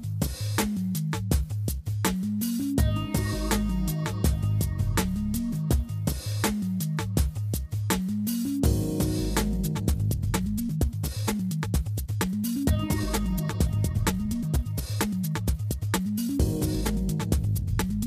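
From 9.47 s to the end there is a time-stretched section: the sound runs about 1.57 times faster while its pitch stays put. This is likely stretching software squeezing the passage by dropping short pieces, so the pace jumps abruptly and sounds rushed.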